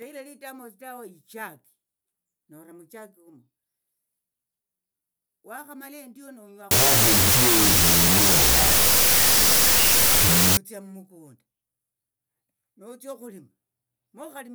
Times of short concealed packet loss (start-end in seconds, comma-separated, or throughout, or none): none